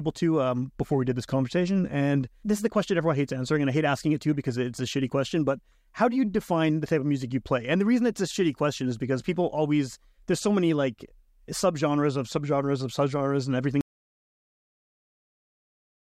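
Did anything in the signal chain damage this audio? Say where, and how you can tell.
Yes. At 13.81 s, right after "subgenres of subgenres and", the speech stops mid-phrase and the clip falls into silence that runs to the end, with no room tone or noise floor underneath. That silent gap points to an audio dropout to silence at the input or capture stage: the source was likely disconnected or muted while the recorder kept writing silence, so whatever followed was never captured.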